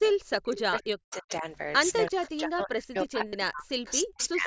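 At 0.04 to 0.11 s an echo leak begins: the far end is likely on a loudspeaker, and its echo canceller passes part of the microphone pickup back down the line. A faint delayed copy of the speech, about 20 dB below it and trailing by 330 ms, shows up. It returns stronger, about 15 dB down, from 0.56 to 1.29 s, and again at about 20 dB down from 2.06 to 2.4 s and from 3.85 to 4.28 s.

From 0.36 to 1.44 s, speech is suppressed in double talk. With both ends active, the canceller likely cannot tell the near talker from the loudspeaker echo and turns the whole signal down. The speech dips and breaks into pieces for roughly 0.7 s in total, falling by as much as about 40 dB at its deepest. The same suppression returns from 2.09 s to the end of the clip, covering roughly 2 s in total with drops of similar depth.

At 3.27 to 3.33 s, inside that second stretch, there is concealed Bluetooth headset packet loss. 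About 52 ms of audio between headset and phone went missing, which fits a short run of lost frames. The receiver filled the gap by repeating the closest-matching slice of recent waveform, giving a brief buzzy, even-toned patch and a slight warble as the real sound resumes.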